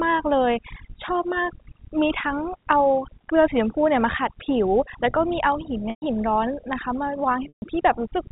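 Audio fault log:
Throughout: overdone noise removal. Suppression set too hard zeroes any frequency bin near the noise estimate, so pauses drop to near silence with twinkling specks. A spectrogram shows a black background dotted with isolated bright points, and holes within the harmonics.
5.90 to 6.02 s and 7.48 to 7.62 s: packet loss with pitch repetition. Gaps of 120 ms and 140 ms are bridged by repeating the last pitch period, a brief buzzy hold that fades to silence before speech cross-fades back. The waveform shows identical repeating cycles shrinking to flat, and the spectrogram shows steady harmonic lines ending in a blank gap. Both gaps fit runs of 20 ms packets, six and seven lost. Throughout, the spectrum stops at 4 kHz, as expected for the telephone coding.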